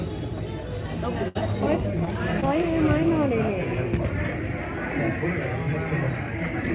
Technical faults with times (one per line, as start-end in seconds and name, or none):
1.28-1.37 burst of packet loss
2.05-2.08 short concealed packet loss
2.40-2.44 short concealed packet loss